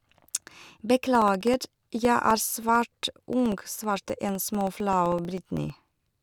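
From 1.15 to 6.15 s, periodic USB or driver dropouts silence about a millisecond every 64 ms: evenly spaced ticks, not random clicks.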